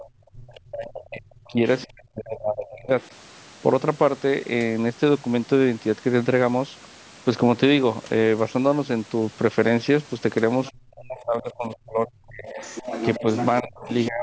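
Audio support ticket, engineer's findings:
Other side's voice leaking through: faint far-end speech at 0.0–0.6 s, 1.81 s, 3.02 s, 10.65–11.77 s, 12.47–14.08 s. Probably residual loudspeaker echo the canceller missed. Mostly quiet, but the last stretch is only about 10 dB under the talker.

Speech suppressed in double talk: talker dips out at 0.32–2.9 s, 10.71–12.6 s, 13.21 s to the end, drops up to about 35 dB. Likely the echo canceller ducking both sides when both talk at once.

Mic path processing rolls off the deep bass and has nothing above 8 kHz, as expected for a call.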